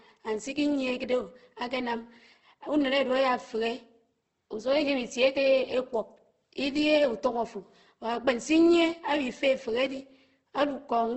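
Throughout the speech, the sound is rough and grainy, with noisy fill replacing fine detail and nothing above 8.2 kHz. This is likely heavy Opus compression, with the damage pointing to a very low bitrate near 12 kbps in the codec's music-style band-coding mode.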